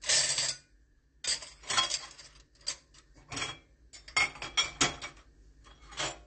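Throughout, a hard spectrogram ceiling at 8.5 kHz and a dull, warbling, fizzy texture point to likely AAC compression, fitting a bitrate near 32 kbps.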